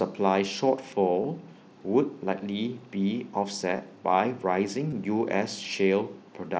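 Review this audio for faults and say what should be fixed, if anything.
Concealed Bluetooth headset packet loss occurs at 1.23 s, 2.38 s, 3.77–3.79 s and 4.90–4.93 s. Each gap is short, about 15 ms for the first two and 22.5 ms for the last two, which fits runs of two or three lost headset frames. The phone filled each gap by repeating the best-matching stretch of the preceding waveform. These runs leave a buzzy sustain held at full level and a slight warble where the real signal resumes. Keeping the headset close to the phone, with fewer obstacles and less 2.4 GHz interference, would prevent these dropouts.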